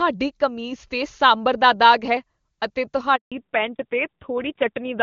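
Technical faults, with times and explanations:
3.16–3.32 s, handover gap: the sound cuts out for about 160 ms. The call was being passed between networks and no speech frames got through during the switch, so the audio drops away almost instantly and stays silent until the new link picks up.
3.32 s to the end, fallback to narrowband: before the gap the HD Voice path sounds clean and full. Afterwards everything above 4 kHz is gone, so the audio turns dull and rougher. That fits the call dropping from AMR wideband to an AMR narrowband codec at around 7.4 kbit/s.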